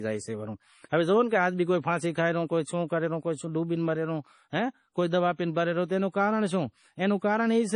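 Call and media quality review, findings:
Watery, swirly speech throughout, with chirpy metallic edges on s sounds and smeared onsets; treble stops dead at about 10.5 kHz. Likely MP3 compression, heavy, which fits a low bitrate near 32 kbps: the encoder drops top band, zeroes weak frequency lines that flicker frame to frame.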